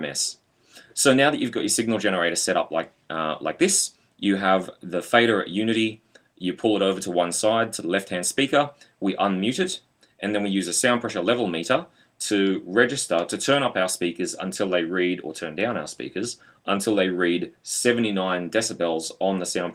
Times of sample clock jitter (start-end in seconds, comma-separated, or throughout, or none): none